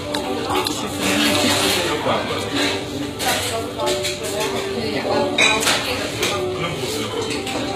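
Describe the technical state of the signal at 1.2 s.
At 1.2 s, as across the whole clip, the treble sounds gritty and metallic, likely from HE-AAC compression at a low bitrate around 20 kbps. Spectral band replication rebuilds the upper band from copied lower bands, so a spectrogram shows a hard ceiling near 14.9 kHz with blocky, misaligned texture below it.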